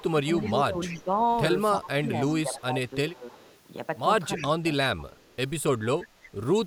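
A faint delayed copy of the speech trails the talker by 316 ms from 0.0 to 1.04 s, about 15 dB below the main speech. It returns at 2.28–2.62 s (around 20 dB down), 3.31–3.57 s (around 30 dB down), 4.37–5.36 s (about 15 dB down again), and as a brief scrap at 6.23–6.29 s. This is echo leak, likely from a far end on loudspeaker whose echo canceller let part of the microphone pickup through and sent it back.

Overlapping that first echo, from 0.0 to 1.17 s, the talker's level sags by up to about 10 dB for well over half a second. The talker is pulled down harder, by up to about 15 dB, across 1.78–3.26 s, and there is a short dip of about 10 dB at 4.37–4.64 s. This is speech suppressed in double talk. With both sides active at once, the echo canceller likely could not tell the local talker apart from the loudspeaker echo and attenuated both.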